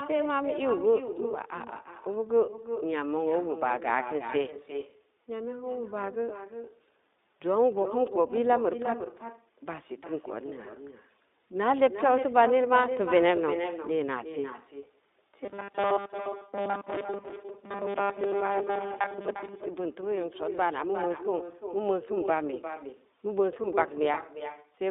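Throughout, the speech returns as an echo with no canceller. A thinner copy trails each phrase by roughly 0.4 s, about 9 dB quieter than the original.

The whole clip also carries the iLBC codec sound. The band runs from 250 Hz to 3.7 kHz, and speech sounds rough and slightly synthetic. This fits the 15.2 kbps mode with 20 ms frames.

From 15.45 to 19.63 s there is robotic sound from repeated short buffers. The speech becomes a rigid metallic buzz at 200 Hz. The likely cause is that 5 ms chunks were repeated while most of the real audio was skipped.

At 23.62 to 23.66 s come lost iLBC frames. One 20 ms frame was concealed by repeating the last pitch cycle. It is heard as a brief held, buzzy vowel that recovers at once.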